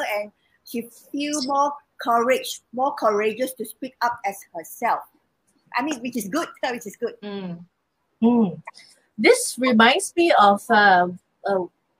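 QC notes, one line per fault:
9.46 s: dropped samples. A single sharp click, likely from about one missing sample, so the waveform jumps abruptly to a later value with no audible gap.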